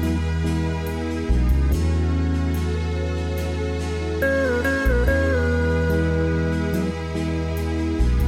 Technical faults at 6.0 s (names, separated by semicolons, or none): none